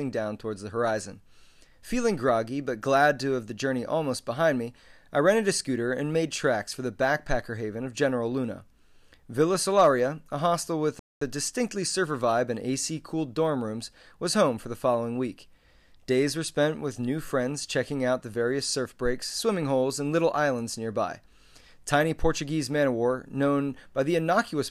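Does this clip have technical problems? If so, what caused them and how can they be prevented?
Yes. A playback stall silences the speech from 10.99 to 11.21 s, a 221 ms gap, likely because the player ran out of buffered data or its thread was blocked. Its length sets it apart from a brief dropout. A larger buffer and a higher-priority audio thread prevent it.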